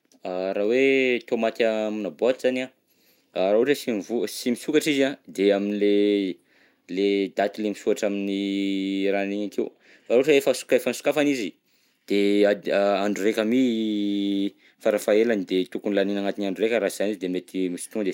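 Nothing in the recording stood out as a technical problem on listening.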